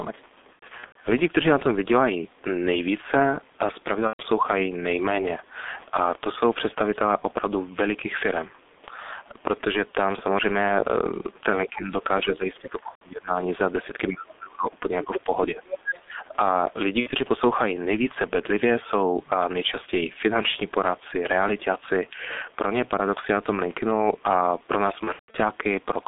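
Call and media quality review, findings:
G.723.1 codec, whole clip. Muffled, hoarse speech with smeared consonants; band limited to roughly 250 Hz to 3.6 kHz. Heavy low-rate coding damage, consistent with a 6.3 kbit/s mode. Slow-updating 30 ms frame model blurs fast transitions, and nothing above the band survives.

VoIP packet loss concealed by the speech codec, at 0.53–0.96 s, 4.07–4.22 s, 12.89–13.03 s, 17.00–17.12 s and 25.04–25.38 s. Speech stretches into buzzy tone or coloured noise, then fades and stays weak after recovery. The decoder extrapolated its last pitch and filter with falling gain. The first event scatters about 240 ms of loss over 420 ms, with a longest gap of 90 ms. The last scatters 210 ms over 300 ms, with a 150 ms gap. The middle three lose 120, 120 and 60 ms.

Speech suppressed in double talk, 15.82–16.16 s. Talker level dips, by roughly 15 dB at its deepest, and thins or breaks up for about 300 ms. 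The likely cause is the echo canceller failing to separate near-end speech from the overlapping loudspeaker echo and attenuating both.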